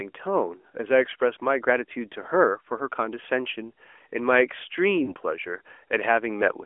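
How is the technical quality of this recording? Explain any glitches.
The speech comes through a narrowband mobile line (AMR-NB), band-limited to roughly 300 Hz–3.4 kHz, with one glitch late in the clip. From 5.04 to 5.13 s the sound briefly smears and dips, then returns rough for a moment. These are lost AMR speech frames: the decoder repeated its last good settings at falling gain across about 40 ms, which points to two dropped 20 ms frames.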